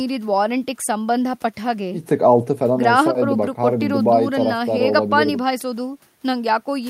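No technical faults are audible.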